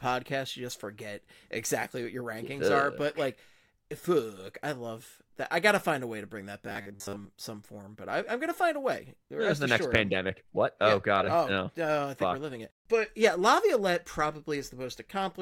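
From 6.67 s to 7.29 s, after "way to bring that" and before "some form but I", the speech turns into robotic sound from repeated short buffers: a rigid, metallic buzz locked at 100 Hz that only loosely tracks the syllables. The likely cause is audio arriving too slowly, so about 10 ms of sound is looped to fill most of the gap. Unlike a dropout, there is no silence, only a fixed-rate buzz running through the voice.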